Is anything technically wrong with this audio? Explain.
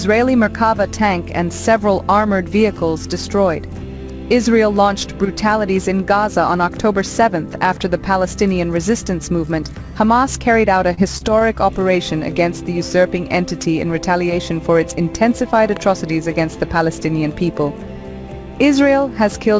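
Yes, there are several brief faults in the transmission and one picked-up click.

Short concealed packet loss at 10.94 to 11.00 s: about 30 ms of audio never arrived in time, so the receiver extended the preceding sound, pitched or noise-like, for 31 ms and then merged back in. It is heard as a quick smear or wobble, with that sliver of real audio gone.

Short stalls from late packets at 11.18 to 11.24 s and 11.39 to 11.44 s: the jitter buffer emptied while waiting, and the receiver held the last sound for 29 ms and then 18 ms before resuming exactly where it left off. Nothing is lost, but the sound lingers briefly with a faint buzz or dip.

Electrical switching spike at 15.77 s: a sharp snap lasting only a couple of milliseconds sits on top of the audio. It is most likely a nearby switch or static discharge arcing into the line. The call path's G.722 coding, which fits a 64 kbps setting, leaves nothing above 8 kHz in the clip.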